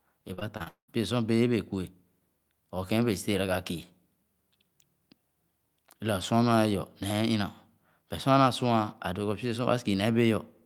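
Repeated packet loss (robotic sound) runs from 0.33 to 0.90 s. Across this short stretch the stream keeps dropping out, about five times in quick succession, and each hole is bridged by stretching the sound that came just before it. Roughly half the span, 305 ms, is this repeated filler, with the longest break at 199 ms. The result is a choppy texture, with pieces of the speech missing between the patched fragments.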